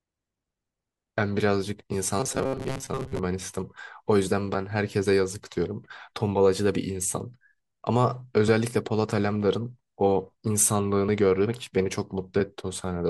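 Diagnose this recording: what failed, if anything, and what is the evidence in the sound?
Robotic sound from repeated short buffers, 2.20 to 3.20 s: speech turns into a rigid 134 Hz buzz, likely a driver buffer underrun looping 7.5 ms segments for about half the audio.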